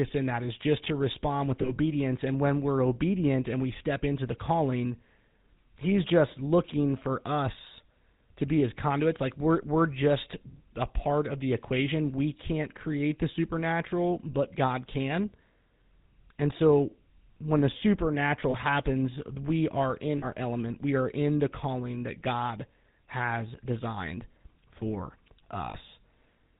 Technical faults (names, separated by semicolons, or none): GSM full-rate codec; lost GSM frames